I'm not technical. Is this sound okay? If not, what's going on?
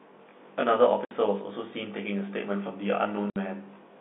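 No. Throughout, there is channel delay (comb filtering): one channel arrives roughly 20 ms late, and mixing the two cancels evenly spaced frequencies, leaving the telephone-band sound rough or slightly doubled. At 1.05 to 1.11 s and again at 3.30 to 3.36 s, packet loss filled with silence cuts 60 ms holes with hard edges, which fits two lost packets each time.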